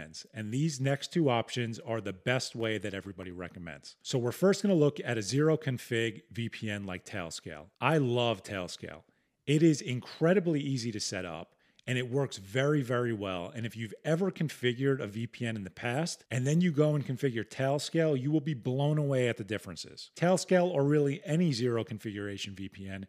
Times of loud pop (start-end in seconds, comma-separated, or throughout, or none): none